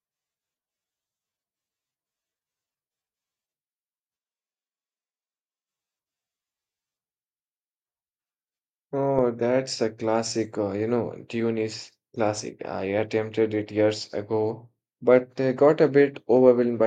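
From 4.19 to 5.67 s, the speech abruptly turns hollow, thin and roomy, drops about 5 dB, and gains background noise. This is likely a switch to a distant microphone.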